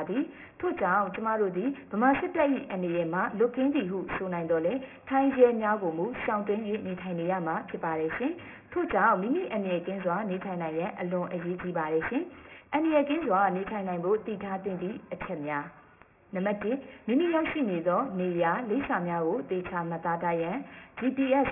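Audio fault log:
Throughout: aliasing. The audio was resampled without an anti-alias filter. The band ends hard at 3 kHz, which points to a rate near 6 kHz. Higher content folds back as gritty, metallic false tones roughly 15 dB below the signal. A spectrogram shows mirrored, inverted streaks packed against that edge.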